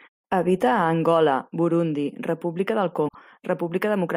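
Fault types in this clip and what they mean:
Broken MP3 bit reservoir: From 3.07 to 3.15 s the speech jumps forward and leaves a short glitch, about 80 ms long. The likely cause is missing MP3 frames. Each frame can store part of its data in earlier frames. After a cut, the next frame reads the wrong bytes. The 80 ms span fits roughly three frames of about 26 ms each.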